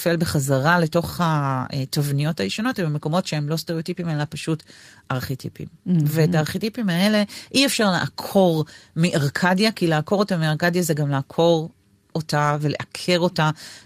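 No technical faults can be heard anywhere in the recording.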